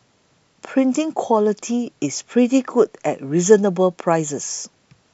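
No technical faults can be heard anywhere in this speech recording. There is nothing in it that calls for a timestamp or a closer listen.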